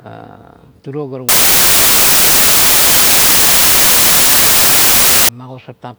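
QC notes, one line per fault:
1.29–5.29 s: samples built from the wrong bytes. The sample bytes are assembled in the wrong order or alignment, so the rapidly varying low-order bits land in the high-order position. The speech turns into loud, harsh broadband noise.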